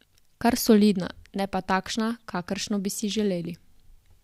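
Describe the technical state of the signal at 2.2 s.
At 2.2 s the speech signal is intact, with no audible dropout, distortion, glitch or other technical fault at that moment.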